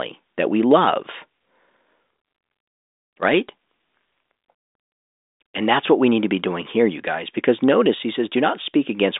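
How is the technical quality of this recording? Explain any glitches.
Nothing stood out on listening; the recording has the narrow band of a telephone line, with nothing above about 3.8 kHz, as expected from G.726 coding at 40 kbit/s, and no glitch could be heard anywhere in it.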